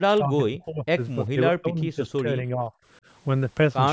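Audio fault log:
0.0–0.98 s, 1.30–1.39 s, 1.61–2.72 s: speech suppressed in double talk. The echo canceller likely took overlapping talk for echo, so speech sinks about 15 to 40 dB, nearly vanishing near 1.3 s.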